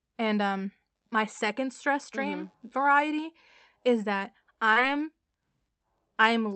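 A speech recording carried over a WebRTC call path using the Opus codec, with a short concealed packet loss at 4.73 to 4.78 s, just after "variety is that". About 20 ms of audio never reached the decoder in time. The receiver bridged the gap by extending the preceding sound for roughly 23 ms and then crossfading back into the real signal, which leaves a brief smear. The audio band stops near 8 kHz, which fits wideband Opus at around 40 kbps.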